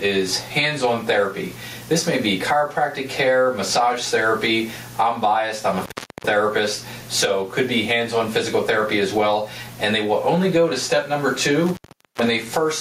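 Gain pumping runs through the whole clip, with the level swinging by around 15 dB. The likely cause is gain set far too high feeding a fast limiter. On a waveform the envelope looks flattened, and a spectrogram shows the noise floor brightening between events.

Intermittent contact breaks the signal from 5.78 to 6.24 s and again from 11.66 to 12.28 s, with the line open for about 0.39 s and then 0.43 s. A loose connection drops the audio, leaving crackle at each edge and faint hiss. The waveform shows a near-flat gap with spikes at its borders.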